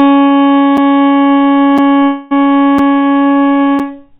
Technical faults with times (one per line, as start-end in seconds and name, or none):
0.77 gap between chunks
1.78 gap between chunks
1.95-2.03 short concealed packet loss
2.03-2.33 long network dropout
2.78 gap between chunks
3.79 gap between chunks